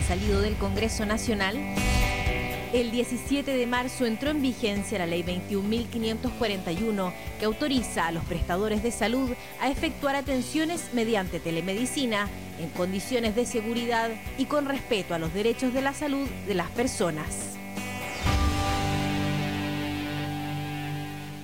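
Low bit depth without dither runs throughout the audio as a grainy distortion that moves with the sound. Quiet passages turn gritty or sputter into silence, with error roughly 25 dB below the signal, which fits likely truncation to 6 bits without dither.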